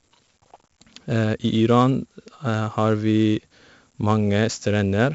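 From start to finish the speech carries heavy 4-bit ADPCM compression. Each sample is coded as a coarse step from a prediction, and the error rides along as gritty hiss that swells with every loud syllable and roughens sharp onsets where the step size lags. Nothing sounds above about 7.7 kHz, which fits roughly 64 kbps at a 16 kHz rate. Unlike perceptual codec damage, there is no watery swirl, only level-tracking grit.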